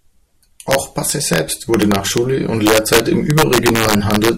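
Integer overflow runs through the whole speech clip. The signal was driven about 4 dB past the top of the integer range. Nothing limited it, so those samples wrapped around to the opposite sign. Each such peak jumps across the full scale in one step. Only a small fraction of samples, under one percent, go over. But each one produces a violent crack on the loudest syllables, far harsher and sharper than ordinary clipping.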